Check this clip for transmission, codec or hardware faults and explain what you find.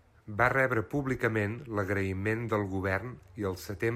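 No transmission, codec or hardware faults are audible in this speech clip.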